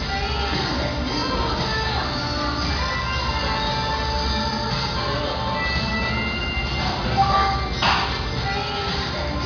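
No technical faults are audible.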